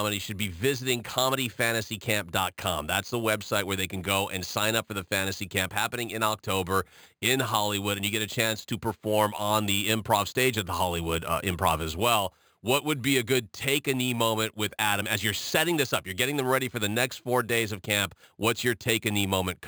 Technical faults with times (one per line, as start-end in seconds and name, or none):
0.00-19.67 imaging from sample-and-hold upsampling